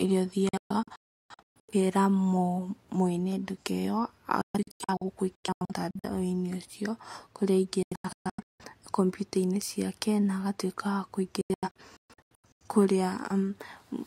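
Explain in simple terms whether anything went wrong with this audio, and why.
Yes. The speech suffers a digital broadcast dropout four times: 0.49–1.74 s, 4.41–6.09 s (ending just before "ũcio kũrĩa"), 7.83–8.64 s (right after "ũcio kũrĩa"), and 11.41–12.66 s (after "ciake na agatuĩka wa"). The receiver lost good data and muted in short, abrupt gaps, so those bits of speech are simply gone.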